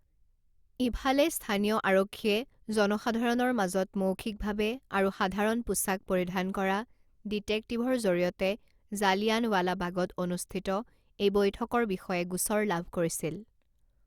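No technical faults can be heard in this speech, so there is nothing to describe in time order.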